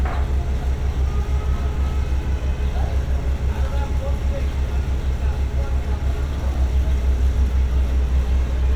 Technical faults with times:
none

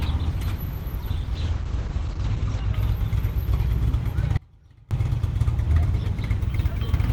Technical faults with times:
1.37-2.79 call bitrate drop
4.37-4.91 audio dropout to a faint residue

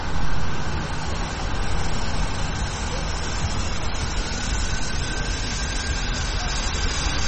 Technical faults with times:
0.00-7.27 MP3 compression

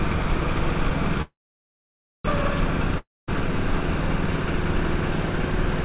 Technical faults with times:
1.22-2.26 call audio freeze
2.98-3.29 long network dropout

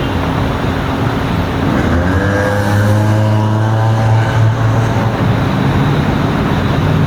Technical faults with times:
0.00-7.06 gain pumping

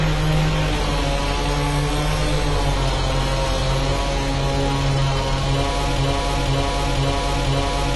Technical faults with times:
0.00-7.96 AAC compression
5.98-7.96 broken-record loop

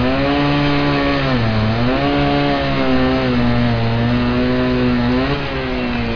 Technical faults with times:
none

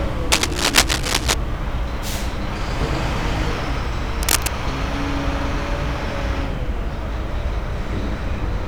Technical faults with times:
0.32-1.34 cable scratch noise
4.23-4.48 cable scratch noise

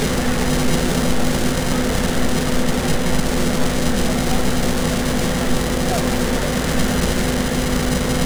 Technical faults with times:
none

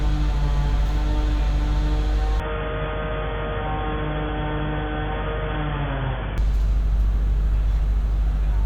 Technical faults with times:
2.40-6.38 input switched to a poorer device

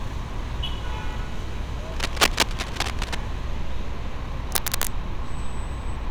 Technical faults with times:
1.92-3.15 cable scratch noise
4.52-4.87 cable scratch noise

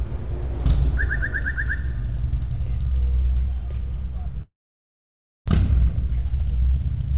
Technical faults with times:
4.42-5.50 long network dropout
5.52-7.13 jitter buffer speed-up

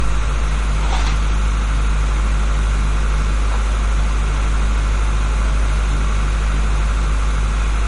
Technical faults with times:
0.00-7.87 low-bitrate audio saved at a high bitrate

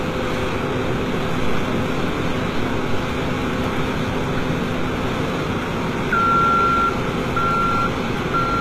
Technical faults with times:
0.00-8.60 HE-AAC compression

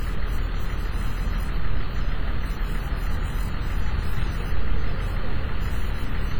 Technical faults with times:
0.00-6.39 WMA compression

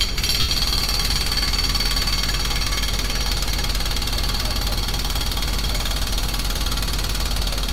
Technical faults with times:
0.40-0.49 lost LE Audio frames

